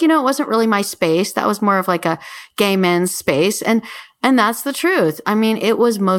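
No technical faults are audible anywhere in the recording.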